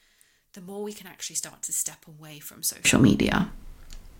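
One channel inverted, from the start to 2.85 s: the speech drops by about 24 dB and turns distant, as if the centre of the sound has been hollowed out. The likely cause is one stereo channel carrying reversed polarity, so the material shared by left and right cancels when the two are summed to mono. Only the small difference between channels survives, leaving a faint residue until the level returns.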